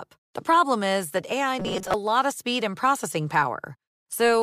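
From 1.60 to 1.94 s, before "lot of speed and", speech becomes a rigid 188 Hz buzz, a robotic sound likely from repeated short buffers; spectrograms show flat harmonic stripes.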